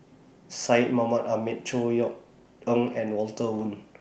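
No technical faults are audible in this speech.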